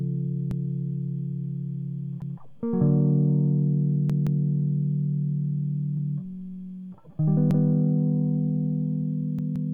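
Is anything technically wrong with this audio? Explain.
Yes. The music stutters six times, each a chunk of about 171 ms replayed with a hard join: at 0.51–0.68 s, 2.22–2.39 s, 4.10–4.44 s, 5.97–6.14 s, 7.51–7.68 s and 9.39–9.73 s. The chunks at 4.10 s and 9.39 s sound three times in all. This is a repeated buffer. Fresh audio reached the output late, so the device replayed its last block, which fits an 8192-sample buffer. The repeats add time rather than skipping music.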